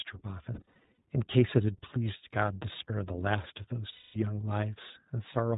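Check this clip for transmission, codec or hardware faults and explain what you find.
The clip has two faults: iLBC codec coloration throughout, and two bursts of lost iLBC frames.

The iLBC codec is plainly audible for the whole clip. The speech is band-limited with nothing above 4 kHz, and it has a slightly rough, synthetic texture from the excitation being coded frame by frame. The quality fits the 15.2 kbps mode with 20 ms frames.

Lost iLBC frames occur from 0.54 to 0.98 s and from 3.92 to 4.17 s. The first burst adds up to about 260 ms of gaps scattered over 440 ms, the longest run roughly 70 ms. The second adds up to 220 ms of lost frames. In both, the decoder fills the gaps by repeating the last pitch cycle mixed with noise, heard as a held, buzzy vowel. The voice is right again almost immediately afterwards.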